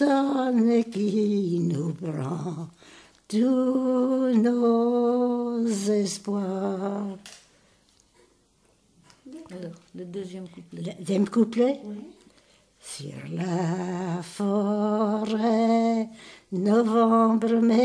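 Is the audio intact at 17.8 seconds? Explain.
Yes, the audio is intact at 17.8 seconds, with no dropout, click, distortion or other fault at that point.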